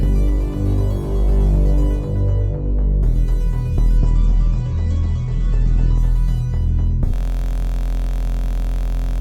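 From 3.98 to 5.98 s the music switches to an adaptive stream at a lower bitrate: treble vanishes above 8.3 kHz, a hard spectrogram ceiling, with smeary codec artefacts. From 7.14 s to the end a system hang loop repeats one 23.2 ms chunk, fitting a 1024-sample buffer, buzzing at 43.1 Hz as identical waveform cycles.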